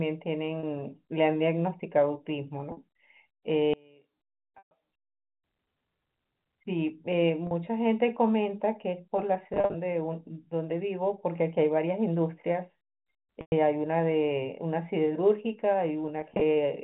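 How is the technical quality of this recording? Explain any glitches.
The recording has two clear problems: repeated dropouts and a stretch where the audio nearly disappears. Underneath, it's a telephone-band speech line with nothing above 4 kHz.

Packet loss with pitch repetition hits at 0.6 s (30 ms), 2.72 s (50 ms), 4.58 s (130 ms), 7.47 s (40 ms), 9.54 s (140 ms scattered over 200 ms), 13.41 s (110 ms) and 16.21 s (80 ms scattered over 200 ms). The receiver loops the last pitch period to fill each gap, so the short ones sound like a brief buzzy hold. The longer ones fade to silence before speech cross-fades back in.

One channel inverted is the likely cause of the dip from 3.7 to 5.4 s. The level drops by about 29 dB because the centred speech cancels when the two channels are summed to mono, leaving only a faint residue.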